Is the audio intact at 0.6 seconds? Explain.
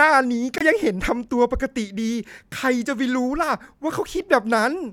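No. At 0.6 seconds the speech is interrupted by a Bluetooth stall running from 0.58 to 0.62 s, containing a gap of silence of about 23 ms. The sound drops out abruptly and then resumes. The likely cause is radio interference delaying packets on the wireless link, so the receiver's buffer emptied and playback halted until retransmitted data arrived.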